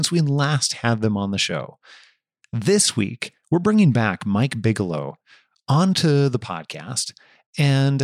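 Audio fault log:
Nothing stood out on listening to this speech recording.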